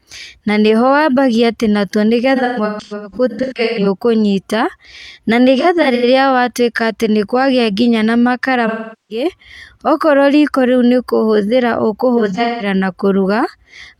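AAC frame loss with concealment hits at 2.36–3.87 s, 5.60–6.05 s, 8.67–9.25 s (after "nĩkwagia nginya na makara", before "okorwo riko") and 12.17–12.66 s. The decoder rebuilds missing frames from old spectrum, giving smeared, phasey patches that show as blurred, streaky spectrogram columns.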